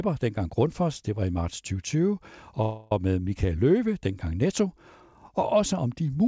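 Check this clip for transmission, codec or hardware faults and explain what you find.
One transmission fault is audible in the speech: a call audio freeze from 2.62 to 2.92 s. The sound stalls and is held as a fading buzzy continuation for about 0.29 s. Packets were likely delayed and the jitter buffer ran dry. When they arrived, the speech resumed where it stopped. Nothing is lost, but everything after runs about 0.29 s late. The audio also has nothing above 8 kHz, which fits a wideband call codec such as G.722.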